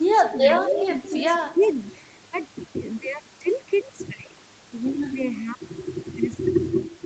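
From 0.01 to 0.11 s, the speech dips by roughly 10 dB for about a tenth of a second, then recovers. This is likely speech suppressed in double talk: with both sides talking, the echo canceller mistook the near talker for loudspeaker echo and turned it down.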